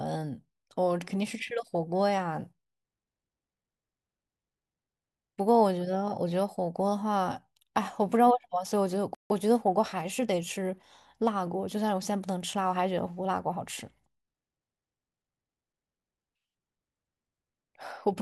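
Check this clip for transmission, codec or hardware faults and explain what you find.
Two playback faults sit back to back near the middle of the speech, one a gap and the other the recovery from it.

Playback stall, 9.15 to 9.30 s: the speech cuts off mid-flow and the output falls silent for about 155 ms before resuming. The likely cause is the player running dry of buffered data, or its audio thread being held up, so nothing reached the output until it caught up. The break is an abrupt hole, not a fade, clearly audible against the continuous speech around it.

Time-compressed catch-up, 9.30 to 10.84 s: once output resumes, the player works off the backlog from the stall by trimming short slices out of the stream and cross-fading across the joins, running about 1.1 times normal speed. Pitch stays where it was, so the voice sounds hurried but not raised until normal pacing returns.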